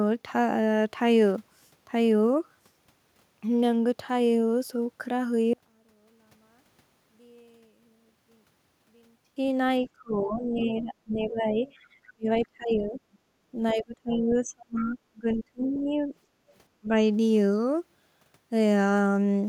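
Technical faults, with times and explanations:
5.53–9.36 s, one channel inverted: a likely reversed polarity on one stereo channel cancels the shared content in mono, dropping the sound by about 38 dB to a faint residue.
9.82–12.99 s, 13.73–16.14 s and 16.81–16.95 s, speech suppressed in double talk: the echo canceller likely confused the talker with loudspeaker echo, ducking speech by roughly 20 to 30 dB in dips and gaps.
9.85–9.90 s, 11.67–11.73 s and 14.10–14.83 s, other side's voice leaking through: the canceller likely left residual loudspeaker echo, so a second voice appears faintly, some 25 to 35 dB below the talker.
13.27–13.40 s and 16.42–16.50 s, background gated by the echo canceller: the canceller clamped the microphone during loudspeaker playback, so room sound briefly dips by about 8 to 9 dB.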